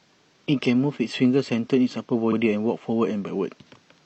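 At 2.28 s the speech stutters. A stretch from 2.28 to 2.33 s is heard twice in a row. This is a repeated frames fault. A compressed block about 46 ms long, which fits a single codec frame, was delivered to the decoder a second time. The decoder played it again without skipping ahead. The result is a brief jolt, like a skip on a record. The sound after it arrives 46.4 ms late, and the clip runs longer by that amount.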